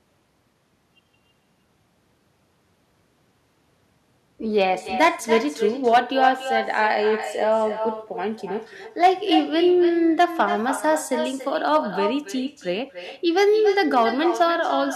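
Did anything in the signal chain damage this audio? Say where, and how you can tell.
Yes. There is hard clipping, most likely at the converter, across the whole clip. Loud peaks crackle because the input was driven about 6 dB past full scale. Only a small fraction of samples are flattened, but each flat top adds harsh high harmonics.

An echo with no canceller, a call-processing fault, also runs throughout. Every phrase is followed by a thinner copy about 9 dB quieter, arriving roughly a third of a second later. The far end's loudspeaker fed its microphone, and nothing subtracted that return path.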